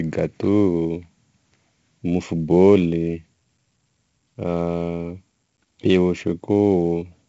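From start to finish, the speech carries heavy 4-bit ADPCM compression. Each sample is coded as a coarse 4-bit step from a predicted value, and the step size adapts as it goes. The error rides with the signal, so every loud syllable gets a gritty hiss. Sharp onsets distort where the step cannot grow quickly enough. Nothing sounds above about 7.8 kHz, which dulls the top and fits a 16 kHz sample rate at roughly 64 kbps.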